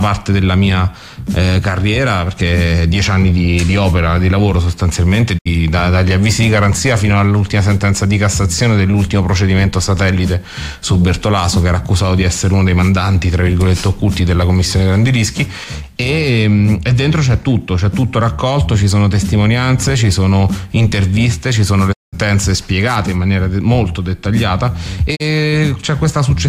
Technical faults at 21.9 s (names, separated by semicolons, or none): digital broadcast dropout